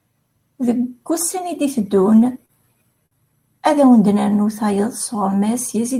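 From 2.03 to 2.52 s the speech shows repeated stalls (stutter): four brief gaps, the longest 33 ms, where late packets emptied the jitter buffer and the last sound was held, dragging briefly. At 3.06 to 3.14 s a short stall from a late packet holds one sound about 51 ms too long before playback resumes unbroken.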